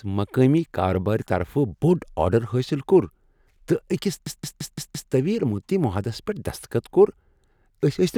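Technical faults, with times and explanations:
4.27 to 5.12 s, system hang loop: the speech suddenly locks into one 170.7 ms fragment repeated exactly five times. The computer or driver froze while the sound hardware kept cycling through the same ring buffer. That loop length fits an 8192-sample buffer. Because each cycle is fairly long, the repetition rate of about 5.9 Hz comes across as a machine-gun stutter rather than a buzz. The speech then carries on with little or nothing missing.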